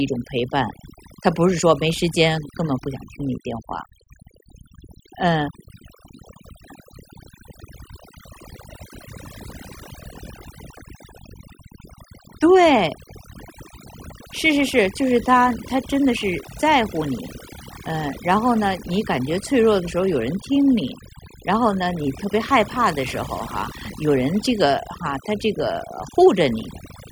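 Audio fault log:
Throughout: overdone noise removal. Noise reduction set too strong gates individual frequency bands near the noise floor, leaving twinkling specks in near-silent gaps and taking quiet parts of the voice down with them.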